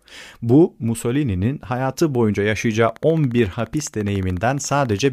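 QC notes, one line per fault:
2.89–5.07 s, train of clicks: likely interference or a faulty connection injects a regular pulse 14.3 times a second, about thirty in all, starting after "hayatı boyunca yaşayacağı". The near-identical clicks, roughly as loud as the speech, form a steady ticking.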